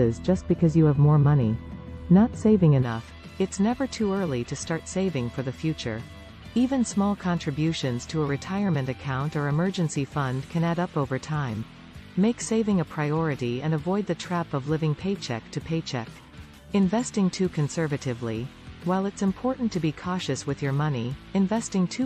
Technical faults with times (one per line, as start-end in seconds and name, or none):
0.00-2.83 de-emphasis applied wrongly